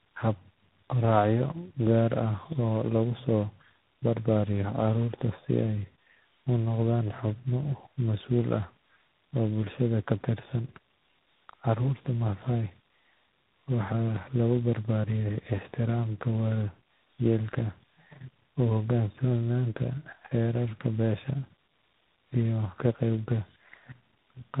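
Tandem speech coding runs throughout: the speech sounds like it was decoded and re-encoded across three codec stages, likely an AMR-NB and CVSD hop ending in 24 kbit/s G.726. Each coder compounds the last one's damage, leaving rough, muffled, warbly speech with nothing above 3.8 kHz.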